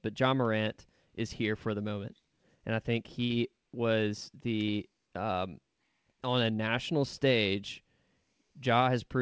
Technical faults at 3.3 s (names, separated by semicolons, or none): burst of packet loss